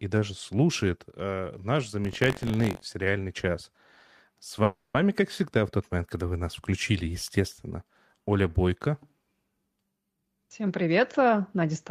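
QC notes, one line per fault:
2.03–2.93 s, buffer tearing: a robotic rattle at 46.9 Hz runs under the speech. This fits a 1024-sample buffer whose writer and reader have slipped. Each period has a small slice, around 7 percent, of audio from about 70 ms earlier, joined hard on both sides.
4.63–4.97 s, call audio freeze: the speech stalls into a fading buzz for 310 ms just before "как всегда в тот". It never drops to silence. The likely cause is delayed packets emptying the jitter buffer. Speech then resumes where it stopped, so nothing is lost, but delay grows by 310 ms.
10.14–11.91 s, jitter buffer speed-up: speech runs at 112 percent speed with pitch unchanged and sounds hurried. To shrink an overfull jitter buffer, the receiver cuts many short pitch-period-length pieces in succession, removing roughly 200 ms in total over this stretch.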